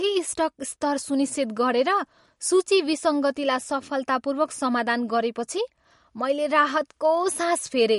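The audio has most likely passed through MP3 compression at a low bitrate, around 49 kbps. With too few bits, the encoder discards the top band entirely, so nothing is heard above about 11.2 kHz, and it drops the weaker frequency lines that don't fit the budget. Those lines flicker in and out from frame to frame, giving the speech a plainly audible watery, swirling texture from start to finish, with metallic chirping on s sounds and softened attacks.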